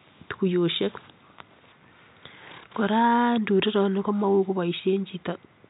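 Speech, with no technical faults to be heard.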